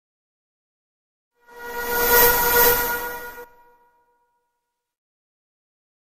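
From 2.00 to 3.44 s a doubled audio track appears: a dry, equally loud copy trails about 400 ms behind, likely from a second, slower capture path.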